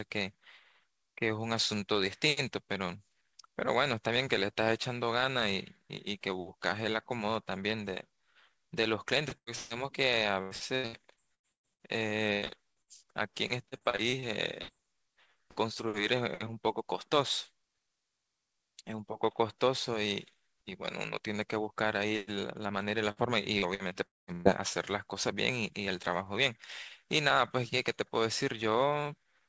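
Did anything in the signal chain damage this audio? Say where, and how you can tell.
Yes. The damage happened on the network, after the call codec. At 9.55 to 9.73 s there is a burst of packet loss. About 150 ms of speech never arrived. The receiver filled the hole by carrying the last sound forward and fading it, so you hear a brief fading buzz or hiss instead of fresh syllables. There is no true silence. The speech then resumes further along, with that stretch simply gone.

From 23.11 to 24.48 s there is repeated packet loss, and the sound turns choppy and robotic. I count six separate holes. Together they remove about 300 ms, and the longest is about 119 ms. Each one is patched by extending the previous sound, and about a fifth of the span is concealment rather than real audio. The holes come close enough together that the patches blur into a choppy, broken texture.

Inside that same stretch, from 24.06 to 24.30 s, the concealment runs out. 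About 210 ms is missing. The patched sound decays quickly, and the last 190 ms or so is plain silence before the speech returns. That pattern is most likely a long network dropout: nothing arrived for longer than the receiver could hide. The band also stops at 8 kHz throughout, which fits the G.722 call codec.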